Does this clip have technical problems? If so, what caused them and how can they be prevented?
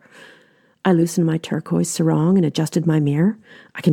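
No, nothing in this speech clip stood out as a technical problem on listening, so there is nothing here that needs preventing.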